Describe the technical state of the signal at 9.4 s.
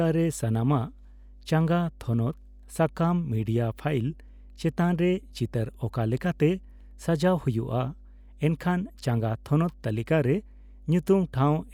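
Mains hum runs under the speech at 9.4 s and throughout, a steady 50 Hz tone that stays fixed in pitch and level. A ground loop or nearby transformer couples the power line in at roughly 25 dB below the signal, unlike broadband hiss.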